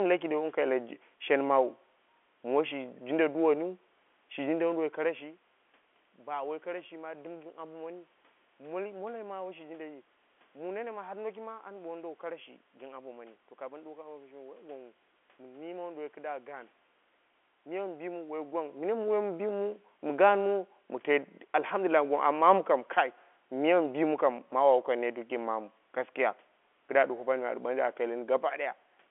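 Speech, with no technical faults to be heard.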